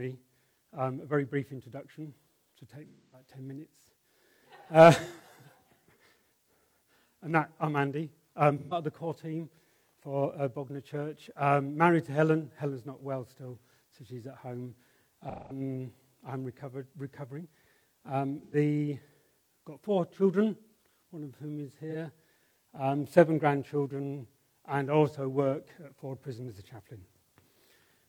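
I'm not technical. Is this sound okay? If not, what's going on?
No. Pieces of the compressed audio stream went missing, five times: at 2.87 to 3.29 s, 8.58 to 8.74 s, 15.29 to 15.60 s, 18.44 to 18.54 s, and 21.90 to 21.95 s. This is AAC frame loss with concealment. The player guessed each missing moment by reusing the last sound it received. Each gap therefore sounds like a brief smeared, hissy or hollow blur in place of the real sound. The first is the longest, about a quarter of a second.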